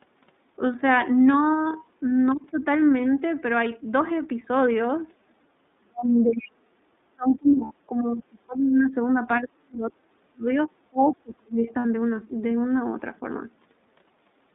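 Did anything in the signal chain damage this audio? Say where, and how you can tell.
Yes. At the codec stage, the whole clip carries iLBC coding: the line band runs only from about 200 Hz to 3.7 kHz, nothing reaches above 4 kHz, and the speech has a plainly audible rough, synthetic edge. At 13.33 kbps this codec codes each 30 ms frame's excitation independently, which buys robustness to loss at the cost of coding efficiency, and the rough, synthetic texture is heard throughout.

In call processing, the talker's speech is pushed down in five places: 5.78 to 6.73 s, 6.99 to 8.94 s, 9.43 to 10.49 s, a brief dip at 10.7 s, and 10.9 to 11.66 s. The deepest drops reach roughly 40 dB, so the voice thins out or breaks into pieces. This is likely speech suppressed in double talk, where the echo canceller could not separate near speech from loudspeaker echo while both sides talked and attenuated everything.

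Also in call processing, a faint second voice comes through from 6.1 to 6.27 s, roughly 20 dB below the talker, arriving inside the first suppression stretch. This is the other side's voice leaking through, likely because the echo canceller left a residue of the far-end loudspeaker signal in the microphone path, so a short scrap of it survived.

At the network stage, two losses of two lost iLBC frames each appear, at 7.64 to 7.72 s and at 11.79 to 11.86 s, each a 60 ms gap. Both sound like a briefly held, slightly buzzy or breathy vowel, since the decoder repeats the last pitch cycle mixed with noise to fill the missing frames. Because iLBC frames stand alone, the voice recovers cleanly right after each gap.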